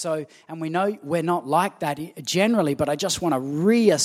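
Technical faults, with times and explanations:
1.02 s, microphone volume stepped up: speech and background noise jump together by about 5 dB in one instant step, as the device's input volume was raised. A speaker leaning closer would not lift the room noise, and a gain ramp would slide gradually.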